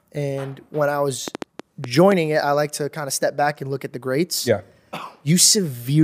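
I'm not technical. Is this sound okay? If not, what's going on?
No. From 1.28 to 2.13 s, just after "and when I", there's a train of clicks. About seven uneven pops. Likely interference from nearby equipment.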